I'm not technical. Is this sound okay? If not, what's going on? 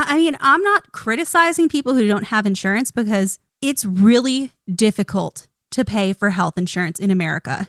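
Yes, this sound is okay, with no problems to point out.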